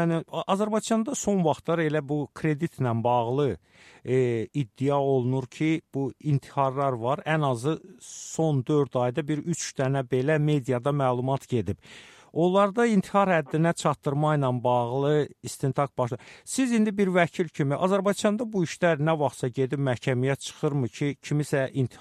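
Nothing stood out as a fault on listening.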